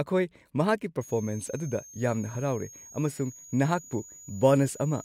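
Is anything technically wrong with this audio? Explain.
Yes. A switching supply whistle runs from 1.01 s to the end of the clip. A switch-mode power supply near the recording chain is cycling at an audible rate, in a light-load burst mode or beating against a second supply, and that switching energy couples into the audio path. It sounds like a thin, high whistle around 7 kHz, wandering between 6.37 and 6.93 kHz, sitting roughly 20 dB below the speech.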